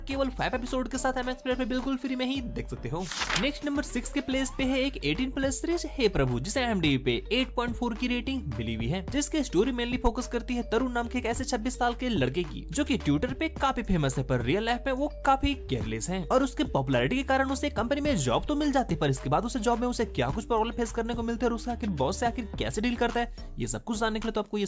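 No technical faults can be heard anywhere in the clip. There is nothing in it that calls for a timestamp.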